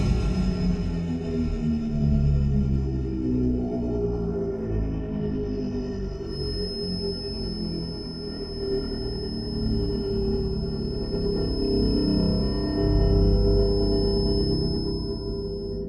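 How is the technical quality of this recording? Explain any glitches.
The recording has one clear fault: a feedback whistle enters at 6.22 s and continues to the end. It is a thin, steady tone at 5.2 kHz, sitting about 15 dB under the sound and swelling and fading slowly in level. The likely cause is a loudspeaker-to-microphone loop held just at the edge of feedback, so a single frequency keeps ringing without building. Unlike a runaway howl, it never builds up, and unlike mains hum it is a high, lone pitch.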